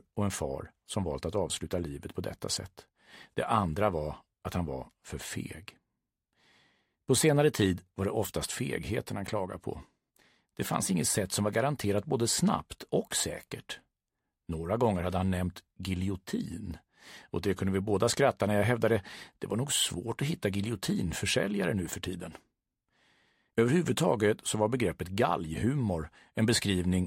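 Nothing is technically wrong with this audio: no fault can be heard anywhere in it.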